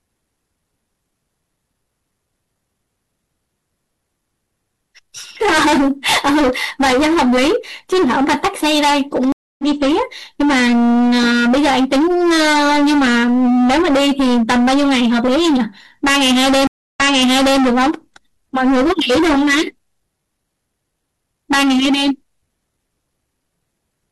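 Hard clipping runs through the whole speech clip: driven about 20 dB past full scale, nearly a third of samples are cut flat, giving harsh fuzz on every loud syllable. Stream reconnects follow at 9.32 s and 16.67 s, with about 0.27 s and 0.29 s of silence. Audio resumes roughly 0.2 s later, then 0.64 s earlier, repeating material.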